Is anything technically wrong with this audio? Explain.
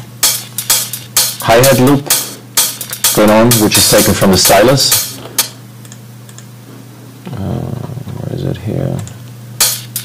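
Yes. Hard clipping runs through the whole clip. The signal was driven roughly 21 dB past what some stage in the chain could pass, so every peak beyond that ceiling was cut flat, and around a tenth of all samples sit pinned at the limit. Those squared-off tops generate strong harmonics high in the spectrum, so each loud passage carries a harsh, buzzing fuzz rather than occasional crackle on isolated peaks.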